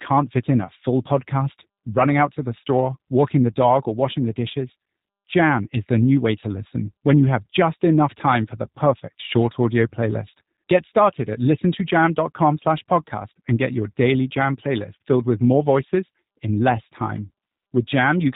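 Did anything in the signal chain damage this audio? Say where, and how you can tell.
Yes. The damage happened at the codec stage, and it runs through the whole clip: the speech has passed through the G.729 codec. The encoder keeps only a vocal tract filter, a pitch predictor and a few pulses per 10 ms frame, then resynthesises the speech. Nothing above 4 kHz survives, so the speech sounds band-limited, and the rough, slightly synthetic texture is plainly audible throughout. This fits an 8 kbit/s G.729A voice link.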